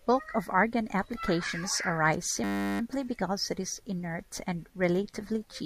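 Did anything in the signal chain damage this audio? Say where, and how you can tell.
Yes. Between "of argon applications arise" and "because it is inert", from 2.44 to 2.8 s, the speech turns into a steady 100 Hz buzz. That is a system hang loop at the driver or buffer stage: the system stalled while the hardware replayed one 10 ms buffer about 36 times, with essentially nothing skipped.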